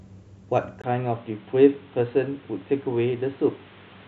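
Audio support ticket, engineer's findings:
Speech goes boxy from 0.82 s on: nothing above 4.1 kHz, 20 ms gap at changeover, new noise about 30 dB down. Likely input switched to a poorer device.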